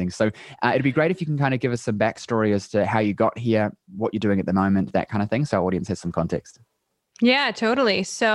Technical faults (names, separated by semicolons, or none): none